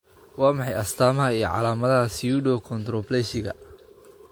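Repeated lossy re-encoding, likely around four passes, gives this speech generation loss throughout: accumulated quantisation noise makes it swirly, hollow and smeared, with blurred attacks, despite content reaching 20.1 kHz. The character fits WMA 1 at 96 kbit/s.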